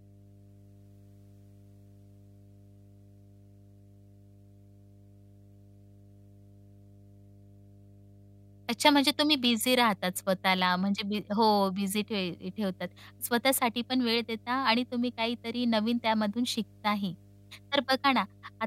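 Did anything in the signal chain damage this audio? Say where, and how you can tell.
Yes: mains hum entered in the analogue wiring, most likely through a ground loop or a nearby transformer coupling the power line into the signal. A steady 50 Hz tone with low harmonics sits under the speech throughout, roughly 30 dB below it.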